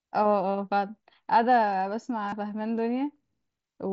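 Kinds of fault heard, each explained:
Concealed Bluetooth headset packet loss: at 2.28 to 2.33 s, about 40 ms of headset audio went missing and was patched by repeating the best-matching stretch of preceding waveform. Unlike a dropout, there is no silence, only a brief buzzy held tone, then a warble as speech returns.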